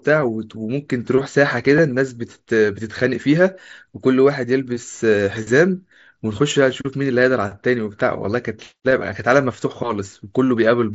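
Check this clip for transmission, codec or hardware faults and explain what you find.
One fault turns up in this speech clip. Concealed Bluetooth headset packet loss at 1.77 s: about 15 ms went missing, which fits a couple of lost frames, and the receiver filled it with a repeat of matching waveform.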